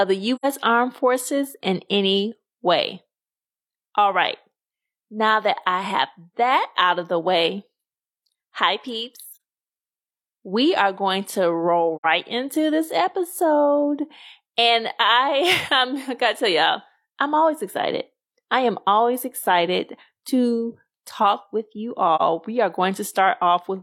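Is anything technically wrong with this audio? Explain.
Yes. There is AAC frame loss with muting in four places: 0.35 to 0.45 s, 9.33 to 9.39 s, 11.96 to 12.05 s just before "into this episode", and 22.16 to 22.22 s right after "with you". The decoder replaced the missing spectral data with zeros, and the overlapping transform windows fade the speech out and back in. The holes last about 85 ms or 43 ms, which fits two lost frames or one.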